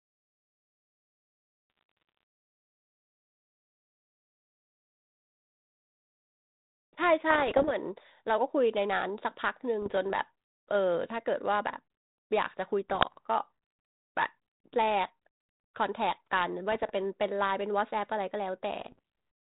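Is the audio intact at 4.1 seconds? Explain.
Yes, the speech is intact at 4.1 seconds, with no fault at that moment.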